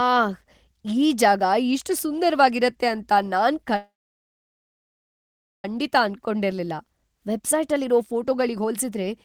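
From 3.76 to 5.65 s a call audio freeze holds the speech: a brief buzz fades into about 1.75 s of silence, likely from delayed packets emptying the jitter buffer. Nothing is lost. From 7.39 to 9.08 s a jitter buffer speed-up trims about a tenth of a second of pitch periods, so speech runs at 107% with unchanged pitch and sounds hurried.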